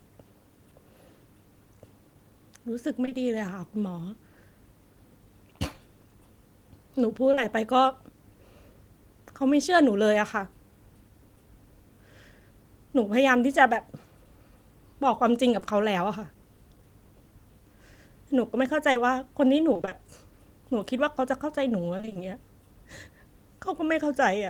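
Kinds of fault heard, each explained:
Repeated packet loss (robotic sound): Several holes arrive in quick succession, each bridged by stretching the last bit of sound. The patches pile up into a choppy stutter with pieces missing. It happens at 3.05–3.17 s and 21.97–22.17 s, where about half of each stretch is filled in, and across 18.91–19.93 s, which is less dense, with 140 ms patched in total and the longest hole 40 ms.
Short concealed packet loss: A brief chunk never reaches the decoder in time, so the receiver continues the previous sound to cover it and then blends back into the real audio. You get a quick smear or wobble rather than a dropout. It shows up at 7.31–7.39 s and again at 15.59–15.67 s, each about 40 ms in two back-to-back 20 ms pieces, which fits 20 ms packets.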